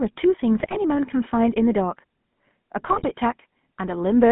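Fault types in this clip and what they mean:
GSM full-rate codec: Throughout, the speech has a buzzy, gravelly roughness, with a thin, boxy tone confined to roughly 150 Hz to 3.5 kHz. That is the signature of the original GSM full-rate codec, consistent with its 13 kbps rate. It rebuilds the voice from a vocal-tract filter driven by a sparse, regularly spaced pulse excitation that keeps only a third of the samples, so fine detail is replaced by a coarse, grainy texture.
GSM bit errors: Twice the voice breaks into squawks, pops and gargling bursts, from 0.6 to 0.78 s and again from 2.84 to 3.07 s. These are corrupted bits reaching the GSM decoder, as happens on a weak radio link. When the filter, pitch or gain values in a frame arrive damaged, the decoder shapes the spectrum wrongly or jumps the level, and the garbled frames run together into these short bursts of distortion.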